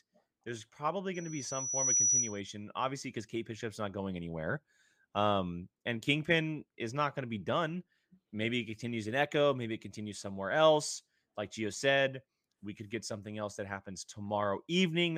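From 1.14 to 2.40 s, just before "obviously because", a loudspeaker feedback squeal rises out of the speech. A single tone near 5.9 kHz swells over roughly three-quarters of a second until it sits a few dB above the voice, then stops. The microphone was picking up its own loudspeaker with loop gain above one at that frequency. The gradual self-reinforcing build sets it apart from a steady interference whistle, which would appear at full level immediately.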